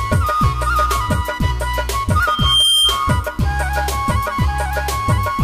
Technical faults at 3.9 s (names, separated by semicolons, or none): none